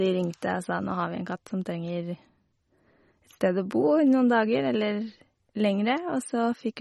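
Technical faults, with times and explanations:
Throughout, MP3 compression: nothing above 11.8 kHz, with watery, swirling speech; likely a low bitrate, near 32 kbps, zeroing weak frequency lines frame to frame, unlike a plain low-pass filter.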